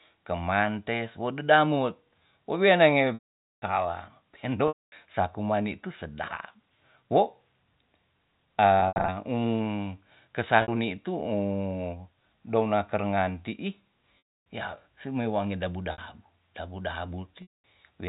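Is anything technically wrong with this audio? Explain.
Yes. The speech has repeated dropouts from packet loss with pitch repetition, heard through a G.711 A-law telephone path at 64 kbps.

Gaps fall at 3.14–3.62 s (480 ms), 4.68–4.92 s (240 ms, just before "sa kuman"), 8.80–9.08 s (160 ms scattered, longest 80 ms), 10.62–10.68 s (60 ms), 14.18–14.46 s (280 ms), 15.92–15.98 s (60 ms) and 17.42–17.54 s (220 ms). The receiver fills each hole by replaying the last pitch period. The 60 ms gaps become a brief buzzy hold. Longer gaps decay to silence within about 50 ms and cross-fade back in.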